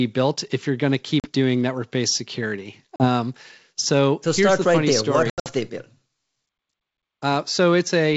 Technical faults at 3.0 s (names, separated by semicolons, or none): packet loss on an ADPCM call